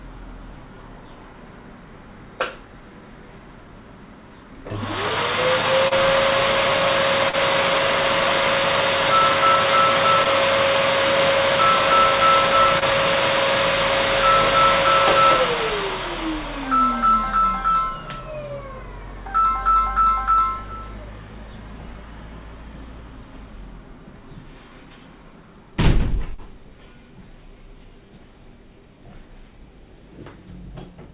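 At 5.88, 7.29, 10.23, 12.79 and 26.35 s, short concealed packet loss: 20 to 40 ms never arrived, so the receiver extended the preceding sound and blended back. That makes a brief smear or wobble rather than the silent gap of a plain dropout, over band-limited audio with nothing above 4 kHz.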